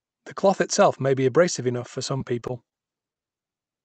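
Choppy, robotic stretches break into this short speech recording from 2.17 to 2.88 s, right after "be abrasive enough for", with repeated packet loss (robotic sound) as the cause. Across that stretch several brief holes open, the longest about 22 ms, and each is patched by stretching the preceding sound forward before the next hole arrives. About 14% of the stretch is synthetic fill, which gives it the choppy, stuttering texture. A second, isolated event at 3.13 s is a short concealed packet loss. Roughly 20 ms of audio failed to arrive in time, and the receiver bridged it with extrapolated sound before rejoining the real signal, leaving a quick smear or wobble. The call path behind both events runs through Opus with an 8 kHz top end, and the coding texture is consistent with a bitrate around 40 kbps.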